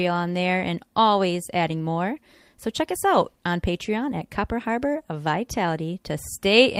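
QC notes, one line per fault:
1.71–1.73 s, lost packet rebuilt from error correction: right after "on there and always", one packet went missing and the decoder played the low-bitrate backup copy carried in the next packet instead. There is no gap, but a brief stretch of about 20 ms sounds rougher and noisier.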